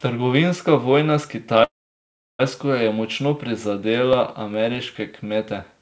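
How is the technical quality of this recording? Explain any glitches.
The recording has two audible glitches, on call audio band-limited to nothing above 8 kHz, which fits a wideband call codec.

A call audio freeze runs from 1.64 to 2.41 s, just after "vojna s". Packets were likely held up and the jitter buffer emptied, leaving a fading tail and then about 0.7 s of silence. The speech then resumes intact, about 0.75 s late.

CD scratch ticks occur from 3.93 to 5.16 s. Seven brief ticks, the longest around 2 ms, come from damaged data that error correction couldn't rebuild and the player had to patch.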